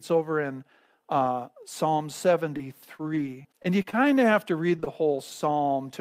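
Short concealed packet loss at 2.57 to 2.61 s: about 20 ms of the stream arrived too late for the decoder, so the receiver extended the preceding sound across the hole and crossfaded back into the real signal. It comes across as a brief smear in the speech rather than a silent dropout.

Repeated packet loss (robotic sound) runs from 2.97 to 3.95 s. Roughly half a dozen separate holes, the longest about 26 ms and together around 120 ms, each get patched by continuing whatever came just before, with the next hole following soon after. About 12 % of this stretch is synthesized, which gives the speech a choppy texture with small pieces missing.

Jitter buffer slow-down follows at once, from 3.95 to 4.33 s. The receiver rebuilt its reserve by repeating single pitch periods, adding about 36 ms and playing this part at 92 % speed. The pitch stays put while the speech sounds drawn out and slightly sluggish.

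Repeated packet loss (robotic sound) returns from 4.76 to 5.16 s, denser this time. Several gaps, the longest about 23 ms and together around 60 ms, are concealed in close succession, and about 19 % of the span is filled in. The result is a more heavily patched stretch than the earlier one.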